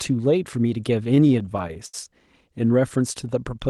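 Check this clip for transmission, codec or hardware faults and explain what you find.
There's one real fault here: a burst of repeated stalls, or stutter, between about 1.15 and 1.94 s. Packets were reaching the receiver late, so its jitter buffer kept running dry, around a dozen times in that stretch. Each time, the receiver stretched the last bit of speech to cover the hole, fading it on the longer waits. The longest fill is about 70 ms. Together the fills come to roughly 190 ms, about a quarter of that span. Nothing's actually lost, but the speech drags and hiccups there. The call path itself sounds like Opus, with the top end rolling off around 12 kHz, which fits a bitrate near 32 kbps.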